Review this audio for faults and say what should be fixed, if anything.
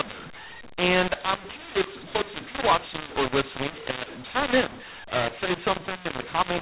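Right through the clip there's a mu-law and A-law mixup. The speech was encoded as mu-law but decoded as A-law, so sample levels land in the wrong places. That's why it sounds harsh and gritty, and why the pauses fill with hiss instead of sitting near silence. The band tops out around 4 kHz, which is what you'd expect from G.711 telephone coding at 8,000 samples a second. To fix it, decode with mu-law to match the encoder, and carry the companding law in the stream signalling or file header so both ends always agree.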